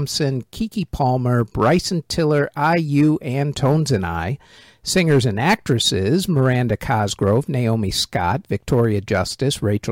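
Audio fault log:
No faults heard.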